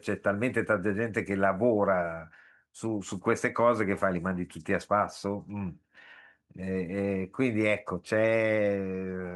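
No technical faults can be heard anywhere in the speech recording. There is nothing to mark at any point in time.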